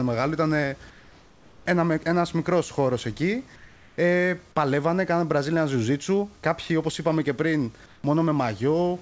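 At 0.90 s, right after "μεγάλο ήταν", the room background drops out until 1.66 s, before "ένας μικρός χώρος εκεί". In its place is comfort noise in place of the background: a steady, featureless hiss about 4 dB quieter. It happens again from 3.56 to 3.98 s, after "ένας μικρός χώρος εκεί", about 3 dB down. Then from 7.86 to 8.04 s, after "όπω είπαμε και πριν", about 2 dB down. The likely cause is discontinuous transmission. The sender went quiet and the receiver synthesised the noise.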